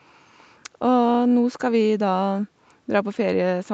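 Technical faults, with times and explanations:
No technical faults can be heard in this speech clip. It has passed through call microphone processing and a WebRTC call path using the Opus codec at about 64 kbps, which leave nothing above 8 kHz.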